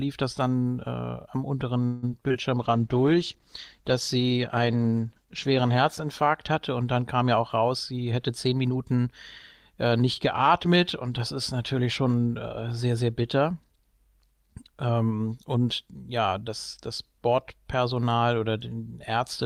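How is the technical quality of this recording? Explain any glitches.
The recording has four kinds of network-related impairment, all within the first ten seconds.

From 1.85 to 2.05 s there is a call audio freeze. The speech stalls into a fading, buzzy continuation of the last sound for about 0.17 s, then resumes where it left off with nothing lost. This is most likely the jitter buffer running empty while packets were held up in transit, so the receiver stretched the final sound until delivery caught up. The net effect is an inserted pause.

Immediately after, at 2.09–2.11 s and again at 2.28–2.32 s, there is short concealed packet loss. Each event has about 20 ms of audio missing. The decoder bridged each hole by extrapolating the preceding sound and cross-fading back into real audio. Each one is heard as a brief smear or wobble in the speech, and a short consonant at either point may come through weakened or absent.

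From 2.59 to 6.86 s a call bitrate drop takes the encoder from 32 kbps down to 13 kbps, and it stays at the lowest rate for about 3.2 s. With the bandwidth estimate cut, Opus quantises more coarsely and narrows the audio band. The speech turns rougher and duller, with a watery texture, until the rate climbs back.

From 7.40 to 9.05 s a jitter buffer speed-up plays the speech at about 108% speed. The buffer had accumulated more audio than its target, so the receiver trimmed pitch-period-length slices repeatedly, removing roughly 0.15 s in total. Pitch is unchanged, but delivery sounds slightly hurried and rhythm is compressed over that stretch.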